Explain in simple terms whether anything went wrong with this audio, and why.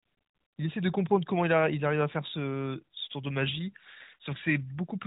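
Nothing went wrong: this is speech carried over the AMR narrowband mobile codec, so it has the ordinary phone-call sound with nothing above about 3.8 kHz, and no fault can be heard anywhere in the clip.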